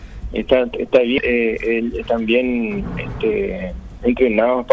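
At 1.18 to 1.20 s a skip ahead occurs: roughly a second of audio was discarded and playback jumps straight to later material with no filled gap, over a band-limited call path.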